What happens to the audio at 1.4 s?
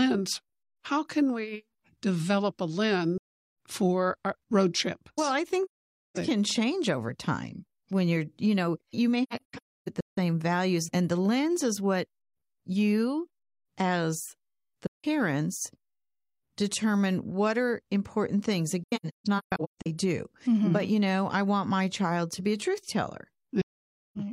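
Nothing goes wrong at 1.4 s; the speech there is intact, with no dropout, click, distortion or other fault audible.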